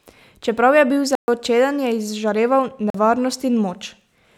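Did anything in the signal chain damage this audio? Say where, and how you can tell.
Yes, at the driver or buffer stage: two blocks of digital silence, at 1.15–1.28 s after "je bil" and 2.90–2.94 s after "čeden je izžareval". The second, about 43 ms, fits an unfilled 2048-sample buffer. Speech drops hard to silence and back with no fade.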